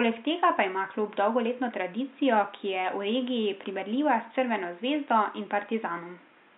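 Nothing is technically wrong with this speech clip; the only thing under the speech is the room's own background noise, about 35 dB below it.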